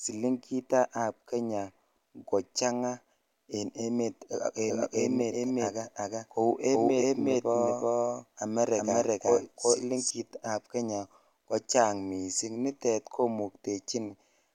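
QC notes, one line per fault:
4.59–10.11 s, doubled audio track: a second full-band copy trails the speech by roughly 400 ms at about equal level, likely from a slower capture path or misaligned edit. Unlike echo, it has no decay or room colour and starts and stops abruptly.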